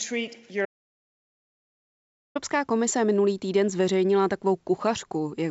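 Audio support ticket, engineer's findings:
Audio dropout to silence, 0.65 to 2.35 s, about 1.7 s lost. Speech cuts out mid-flow to silence, no room tone, resumes at "komise minulý týden zveřejnila". Likely input loss upstream (device disconnect or mute) while the writer kept writing silence. Content in the gap unrecoverable. Call path band-limited to 8 kHz, consistent with G.722.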